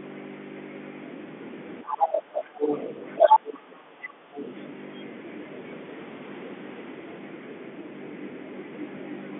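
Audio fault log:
1.89–2.42 s, 2.58–2.94 s, 3.17–3.51 s and 4.37–4.42 s, other side's voice leaking through: a second, fainter voice sits under the talker, about 15, 20, 10 and 35 dB down respectively. It is squeezed into the same narrow telephone band as the talker. The likely cause is loudspeaker playback that the echo canceller failed to remove fully. On a spectrogram, faint extra harmonic stacks appear that do not line up with the talker's pitch. On the waveform, low-level energy fills what should be quieter gaps.
2.2–2.58 s, background gated by the echo canceller: the room sound ducks by about 15 dB for roughly 0.3 s in total, then comes back. The canceller clamped the microphone hard while the loudspeaker was active, taking the ambience down with the echo. On a waveform, the noise floor steps down abruptly and recovers. On a spectrogram, the broadband background haze thins markedly across the whole band for that stretch, with sharp edges at both ends.
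3.52–4.04 s, speech suppressed in double talk: the talker's own voice dips sharply, by around 40 dB at its deepest, in pieces adding up to about 0.4 s. This is likely the canceller mistaking simultaneous talk for echo and attenuating everything. The waveform shows the speech envelope collapsing in chunks. The spectrogram shows the talker's harmonics and upper band broken into gaps rather than tapering naturally.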